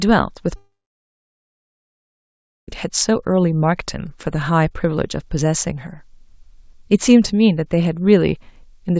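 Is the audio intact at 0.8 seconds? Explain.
No. At 0.8 seconds the sound sits inside a gap from 0.56 to 2.69 s, likely a long network dropout. The receiver stretches the last sound into a fading buzz, then leaves near silence. About 2.1 s of audio never returns.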